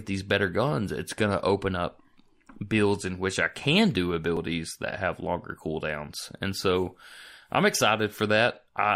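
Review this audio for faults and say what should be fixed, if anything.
Damaged data in a compressed stream at 4.37 s, right after "which I can do": corrupted frame bytes make the decoder lose sync, giving a brief blip before "that have longer cooldowns". Preventing it means checksumming the encoded file or stream in transit and storage so corrupted frames are caught and re-fetched before decoding.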